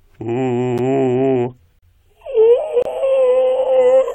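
Music that drops briefly into hard-edged silence at 0.78 s, 1.79–1.83 s and 2.82–2.85 s, roughly once a second: gaps between stream segments, where 1-second segments' timestamps leave holes of 10 to 38 ms filled with silence.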